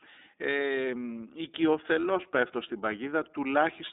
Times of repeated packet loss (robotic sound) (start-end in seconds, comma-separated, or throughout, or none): none